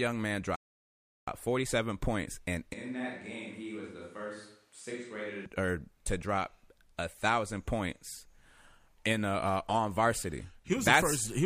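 At 0.56 s the speech cuts out mid-flow and stays silent until 1.28 s, a gap of about 0.72 s, before resuming. This is a playback stall, most likely the player running short of data or having its output thread blocked, so nothing reached the output until it recovered. On a waveform it appears as a flat line with abrupt edges. A spectrogram shows a clean vertical blank across all frequencies for that span.

From 2.73 s, right after "points and", the voice suddenly turns hollow and roomy on "to or to", and it stays that way until 5.46 s, where it snaps back. The cause is likely a switch to a distant microphone, with a far-off pickup standing in for the close one. The level drops by roughly 10 dB, the bass thins, and room noise rises to around 30 dB below the speech. The waveform envelope shrinks and smears. The spectrogram shows weaker low frequencies, a raised noise floor between phrases, and reverberant tails trailing each syllable.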